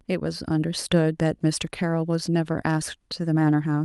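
Nothing in this speech recording stood out as a technical fault on listening.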